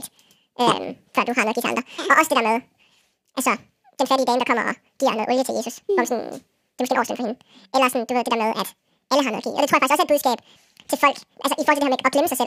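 Throughout, the speech is read two samples at a time, doubling speed and raising pitch an octave.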